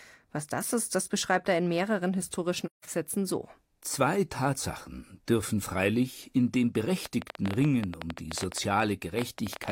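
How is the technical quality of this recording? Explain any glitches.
The recording has two distinct faults: a brief dropout early on and a stretch of ticking near the end.

AAC frame loss with muting occurs from 2.66 to 2.84 s, just after "er in mehreren historischen". The decoder received no data for this stretch and output silence in its place. Because AAC frames overlap, the level fades down and back up rather than cutting abruptly. The result is a soft hole of about 0.17 s, which fits roughly four missing frames. On a waveform it appears as a tapered gap, and on a spectrogram as a blank vertical band across all frequencies.

A train of clicks runs from 7.06 s to the end at 9.71 s, starting after "dürfen freilich in dem". Around thirty sharp, similarly shaped pulses arrive at about 11 per second with uneven spacing. They are heard as popping laid over the speech and through its pauses, peaking roughly 10 dB above the signal. 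The likely cause is electrical interference or a faulty connection or power supply. A waveform shows narrow spikes, and a spectrogram shows thin full-height vertical lines.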